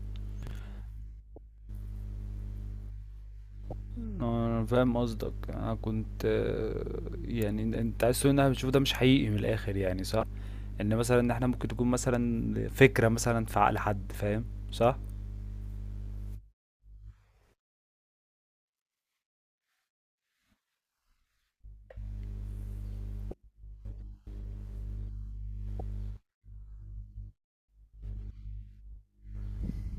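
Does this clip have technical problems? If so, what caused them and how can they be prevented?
Yes. At 0.43 to 0.51 s there are chunks out of order: one chunk of about 43 ms plays one chunk late. The result is a brief jumbled stutter with hard joins. Unlike a dropout, nothing is missing. Writing buffers with sequence numbers, and reordering them before playback, prevents this.

Damaged data in a compressed stream produces short glitches at 1.35, 3.70, 10.20, 23.31 and 25.78 s, each about 30 ms long. At each point the decoder misreads corrupted frames and resynchronises, so the sound glitches. Checksummed transport with retransmission, or error-protected storage, prevents this.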